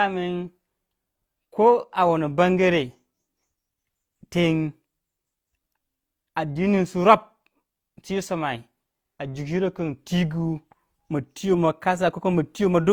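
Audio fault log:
throughout: transcoding between lossy codecs. The speech was likely coded twice, in a chain that fits HE-AAC at 48 kbit/s then Opus at 32 kbit/s. The second encoder wastes bits on the first's artefacts, layering the two codecs' different artefacts, with nothing above 20.2 kHz.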